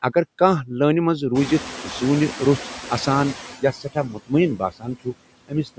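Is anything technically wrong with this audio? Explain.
Yes. The speech has been through a noise suppressor that is working hard, and it leaves three kinds of fault.

Noise suppressor artifacts run through the whole clip. The suppressor judges, frame by frame, which frequency bands hold steady noise and turns them down, here by about 9 dB. The residue doesn't sit still: the background dips in the gaps between words and swells back underneath them.

The noise suppressor is catching up from 1.34 to 3.55 s. Around 1.5 s the room noise jumps by about 22 dB, and the suppressor's estimate of the noise floor trails behind that change. For roughly 2.2 s the louder background passes through with too little reduction. It then settles lower, to about 11 dB of cut, as the estimate adapts, so the noise audibly sinks over those two seconds rather than all at once.

The noise suppressor cuts speech at 3.61 to 4.32 s, 4.57 to 5.14 s and 5.48 to 5.78 s. 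With the noise now only about 12 dB below the voice, the suppressor mistakes quieter parts of the speech for background and lowers them along with it. The deepest drops are about 22, 20 and 19 dB, covering around 0.4 s, 0.3 s and 0.15 s of speech respectively, and those stretches sound swallowed or faded.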